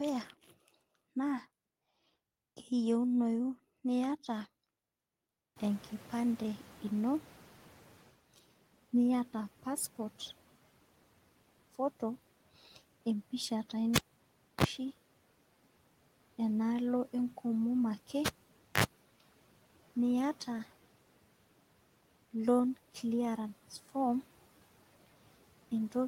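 Around 5.5 s the room noise jumps by about 24 dB, and from 5.56 s to 8.16 s the noise suppressor can be heard catching up. Its noise estimate trails the new level, so the noise passes at first with less reduction, then sinks by about 10 dB over 2.6 s.

At 13.96 s, just after "empisha taa", a cable is pulled and plugged in. A pop is followed by 0.63 s of near silence, a 35 ms burst of 60 Hz mains buzz from tip-only contact, and a second pop at 14.64 s. It recurs from 18.26 s to 18.84 s, with a 0.53 s gap and 63 ms of 50 Hz buzz.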